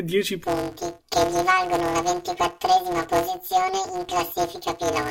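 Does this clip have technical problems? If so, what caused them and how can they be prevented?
Yes. From 0.44 s to the end, planar audio read as interleaved turns the speech into a robotic buzz at about 188 Hz. Each 5.33 ms block, which fits 256-sample planar blocks, plays as a double-speed left half and then a right half, with no octave shift. A spectrogram would show evenly spaced lines 188 Hz apart, and the waveform would show a repeating 5.33 ms pattern. To prevent it, check whether the decoder outputs planar or interleaved data and convert the layout before playback.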